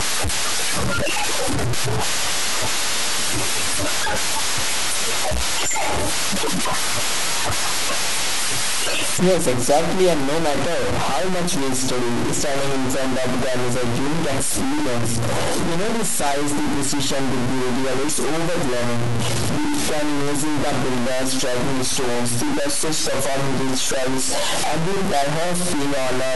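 From start to finish the speech is coated in coarse, grainy distortion that tracks the voice, with the quiet tails sputtering or dropping out. That's low bit depth without dither, likely truncation to something like 3 bits, leaving error nearly as loud as the speech itself.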